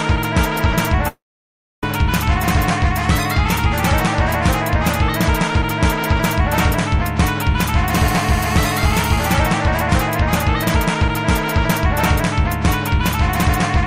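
From 1.08 s to 1.83 s, a long network dropout likely interrupted the stream: no audio arrived for about 0.75 s, and the receiver tried to cover the gap by extending the last sound. That fill decays within a fraction of a second into near silence lasting about 0.64 s. The audio then resumes further along, and the material from that stretch is simply gone, leaving an audible hole.

Between 7.95 s and 9.31 s, a nearby 2G handset on an active call is transmitting in bursts about 217 times a second. The audio circuitry rectifies those radio pulses into the signal path, producing a GSM phone buzz. It is a hard, raspy tone at 217 Hz with a dense stack of harmonics, unrelated to the program material. Because the phone is on a call, it stays steady at about 12 dB below the signal.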